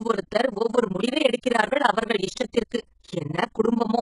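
Throughout the speech, the sound is likely from HE-AAC compression at a very low bitrate, around 12 kbps. Treble is rebuilt from copied lower bands and makes sibilants gritty and metallic.

Overlap-add ripple also runs throughout: frames rejoined with uneven overlap make the level dip by about 60 dB roughly twenty times a second, giving a fast, rough flutter.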